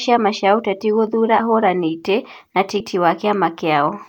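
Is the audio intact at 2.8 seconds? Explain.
No. At 2.8 s the speech jumps forward, dropping roughly 150 ms of sound in an instant. This is compressed frames skipped: several whole frames were never decoded, because they were missing or rejected as damaged. The gap fits a few 32 ms frames.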